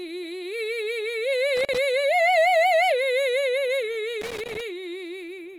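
At 1.57 to 1.78 s and again at 4.21 to 4.61 s, loose connector crackle chops the music as a worn contact makes and breaks. It shows as scattered vertical broadband streaks and jagged waveform spikes.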